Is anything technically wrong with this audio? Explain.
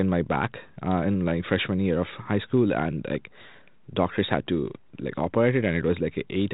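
No, nothing here stands out as a problem; the speech comes through 32 kbit/s G.726 ADPCM telephone coding, which leaves only the light, narrowband character you'd expect from that path.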